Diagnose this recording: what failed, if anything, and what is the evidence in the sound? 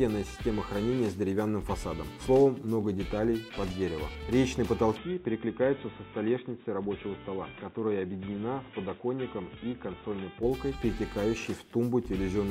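At 4.97 s the sound abruptly turns dull and boxy, and at 10.43 s it opens up again. In between, nothing above 3.8 kHz survives. The level drops by roughly 5 dB. A new background noise appears, sitting some 35 dB under the signal. There is no gap at either change. This points to the input stage: the input switched to a poorer device, likely a headset's narrowband call profile, then switched back.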